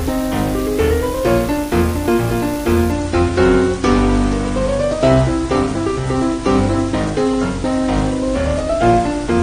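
An adaptive stream at a lower bitrate takes over from 2.91 s onward. The player switched to a leaner encoding when throughput fell, so the treble abruptly thins and codec artefacts rise with no gap, which fits a step down from 96 to 32 kbit/s AAC.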